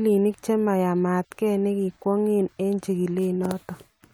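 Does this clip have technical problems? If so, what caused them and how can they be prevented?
No, nothing technical goes wrong anywhere in this bit of speech, so there's nothing here that needs preventing.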